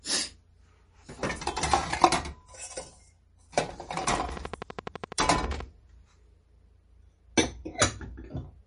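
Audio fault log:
Throughout: MP3 compression. Everything above 10.6 kHz is gone, so the top end sounds dull and capped, and the damage is plainly audible: a watery, swirly quality as weak frequency detail flickers in and out between frames, with transients smeared rather than crisp. That's what happens when the encoder runs short of bits and drops whatever its hearing model judges least important. The sound points to a low bitrate, likely somewhere around 40 kbps.
4.04 to 5.61 s: train of clicks. A steady ticking sits on top of the sound, about twenty near-identical pulses arriving at a regular 12.2 per second, each one poking out roughly 10 dB above the surrounding level. They keep the same shape and spacing whatever the sound underneath is doing, so they're clearly coming from outside it. The likely culprit is electrical interference from nearby gear or a faulty connection or power supply.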